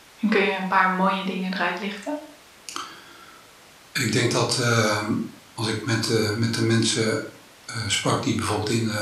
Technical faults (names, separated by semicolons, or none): none